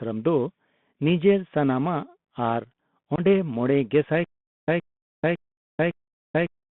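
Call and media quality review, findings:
Bluetooth CVSD headset codec, whole clip. Narrowband speech, about 150 Hz to 3.6 kHz. Granular hiss under the voice. Scratchy sibilants. Loud bright passages distort. Component: headset link. Mechanism: one-bit up/down coding at 64 kHz. Adaptive step cannot follow fast, loud high content.

Unconcealed Bluetooth headset packet loss, 3.16 to 3.20 s, just before "ᱢᱚᱲᱮ ᱜᱮᱥᱟᱭ". A 22.5 ms hole with abrupt edges. Level dips briefly on return. Component: headset radio link. Mechanism: several short voice packets dropped and filled with silence, no concealment.

Stutter with silent gaps, 4.24 s to end, right after "ᱢᱚᱲᱮ ᱜᱮᱥᱟᱭ". A 118 ms fragment repeats 4 times. Each repeat is followed by 438 ms of digital silence, giving a 556 ms cycle. Original audio lost. Component: likely a player or stream stall, replaying its last buffer on each retry.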